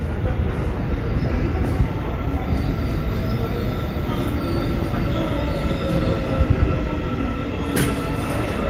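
No technical faults are audible anywhere in this recording of sounds. The audio runs continuously from beginning to end with nothing to flag.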